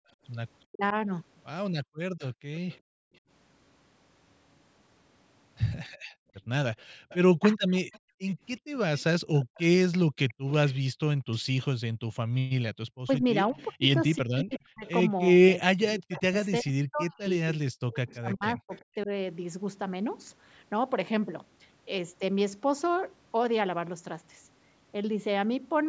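From 0.0 to 12.08 s the background is gated by the echo canceller: the room tone dips by up to about 39 dB, for around two seconds in total, and comes back when the canceller releases. This gating takes down only the ambience, which sets it apart from double-talk suppression.

Between 0.7 and 0.95 s, and again from 7.4 to 7.66 s, the speech itself dips sharply, by roughly 40 dB for brief moments. This is likely speech suppressed in double talk, with the canceller turning the talker down while the far side was also active.

From 2.19 to 2.79 s, and then from 7.09 to 18.79 s, a faint copy of the speech trails it by 0.36 s, about 25 dB below. This is an echo leak, likely from a loudspeaker path the canceller did not fully clean. Unlike the dips, it adds sound rather than removing it.

From 13.04 to 19.1 s the speech again breaks up in pieces, cutting out for about three seconds in total, overlapping the echo.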